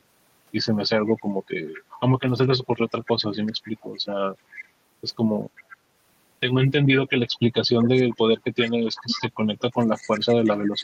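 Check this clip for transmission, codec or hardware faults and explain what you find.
Four faults are audible in this speech recording, one running through the whole clip and three occurring at specific moments.

Low bit depth without dither runs throughout. The signal was likely rounded to about 5 bits with no dither. The rounding error therefore tracks the waveform as grainy distortion sitting roughly 20 dB below the speech, and it roughens quieter passages most.

Echo leak occurs at 1.08–1.98 s, 3.06–3.10 s, 3.46–3.99 s, 4.53–4.68 s, 5.57–5.72 s and 7.82–9.22 s. The far end's echo canceller likely failed to remove its loudspeaker pickup, so a copy returns 375 ms late. It is mostly faint, but in the last stretch it is noticeably louder.

Background gated by the echo canceller occurs at 4.40–4.51 s. The canceller clamped the microphone while its loudspeaker was active. For about a tenth of a second the room sound dips by about 7 dB, then recovers once the canceller releases.

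Speech suppressed in double talk runs from 9.62 s to the end. With both sides talking, the canceller likely mistook the talker for echo and attenuated everything. The voice drops by up to around 30 dB.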